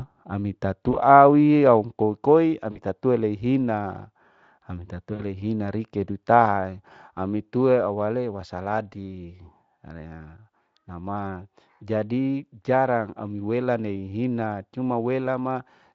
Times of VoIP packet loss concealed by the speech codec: 0.91-0.96, 2.71-2.80, 5.13-5.23

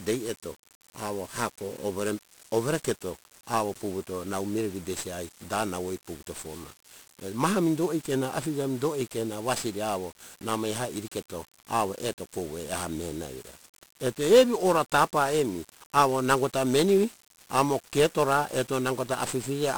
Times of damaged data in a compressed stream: none

